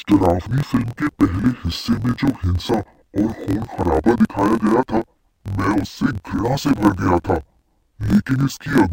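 From start to finish the speech is affected by interleaved audio read as planar. Each block of alternating left and right samples is split into halves, with the first half treated as left and the second as right, so each channel plays its share at half speed. The result sits an octave low and sounds doubled and choppy, chopped at about 43.1 Hz in roughly 23.22 ms blocks, which fits a 1024-sample block. Unlike simple half-speed playback, the overall pace of the speech stays normal.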